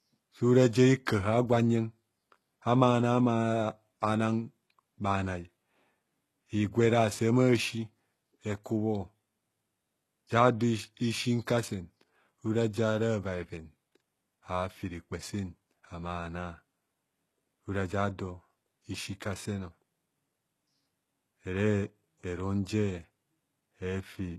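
From start to finish, the speech sounds bright but synthetic in the treble: s sounds come out gritty and lispy, with a metallic sheen, and nothing is left above 12.3 kHz. This is likely HE-AAC compression, heavily damaged, at a rate that points to roughly 16 kbps. Only the lower spectrum is truly coded. The upper bands are rebuilt by copying lower content upward under a coarse envelope, so treble harmonics no longer line up with the real ones.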